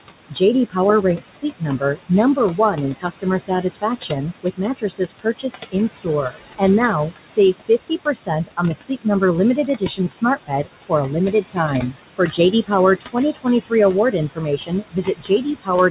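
Noise suppressor artifacts run through the whole clip. The suppressor pulls the steady room noise down by about 21 dB between phrases, so the noise dips in the gaps and swells back under the speech. Unlike a plain noise gate, this works band by band rather than switching on and off. The room noise itself sits about 11 dB below the speech.

The suppressor also cuts speech, at 0.29–0.76 s, 1.17–6.62 s, 7.11–9.22 s, 9.56–13.72 s and from 14.11 s to the end. Soft consonants and word endings drop by about 20 to 22 dB and sound swallowed, adding up to roughly 0.2 s, 2 s, half a second and 1 s across the first four spans. These are partial losses, not full dropouts. The dull top end is different: it is steady throughout and comes from the call codec, with nothing above 4 kHz, which fits narrowband G.711.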